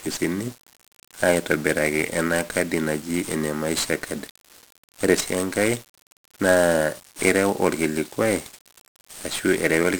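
From start to finish the speech carries 1-bit DFPWM compression damage: each sample becomes a single up-or-down step, leaving heavy broadband fuzz and crackle, with treble sunk in hiss. A spectrogram shows a dense noise floor smeared across all frequencies, which fits a low rate near 48 kbps.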